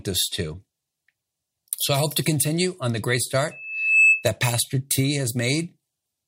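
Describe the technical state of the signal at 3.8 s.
Loudspeaker feedback squeal runs from 3.51 to 4.27 s, right after "continue on the great". The microphone is picking up its own loudspeaker, and the loop gain passes one at 2.6 kHz. That tone swells over roughly half a second to about 10 dB above the speech.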